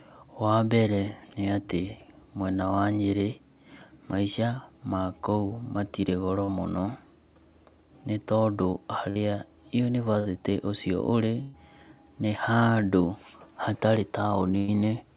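At 6.44 s a brief smear runs to 6.50 s, where the sound wobbles for an instant before settling. This is short concealed packet loss: about 40 ms of audio never reached the decoder in time, so the receiver bridged the hole by extending the preceding sound, following its pitch if voiced or as shaped noise if not, and then blended back into the real signal.

Four longer dropouts follow, each a held buzz or fading hiss before the sound picks up further along: 9.10 to 9.17 s, 10.19 to 10.27 s, 11.41 to 11.56 s and 14.58 to 14.70 s. The last two, at roughly 120 ms and 100 ms, are the longest. Each is a burst of packet loss, with a run of audio lost or arriving too late to play. The receiver stretched the last sound across the gap while turning it down, and the material in between is simply gone. All of this sits on narrowband call audio with nothing above 4 kHz, which points to a G.711 A-law path at 64 kbps.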